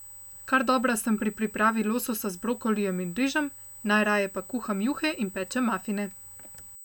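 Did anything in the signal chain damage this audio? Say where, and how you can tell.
Yes, there's USB whine in the analogue wiring: a steady 8 kHz tone, strongest at 16 kHz, roughly 20 dB under the speech throughout, from bus microframes leaking via power or ground.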